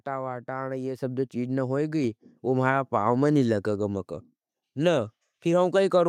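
At 1.02 s the microphone volume stepped up, just before "सब जो चीज़ न". The call software judged the input too quiet and raised the device gain in one step. Voice and background jump together by about 5 dB, with no gradual change.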